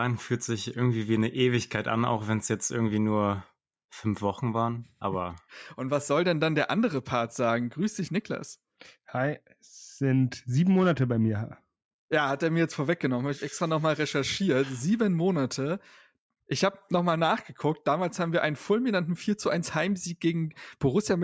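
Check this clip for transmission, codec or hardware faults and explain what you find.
Nothing stood out on listening to this speech recording; no transmission, codec or hardware problem could be heard at any point.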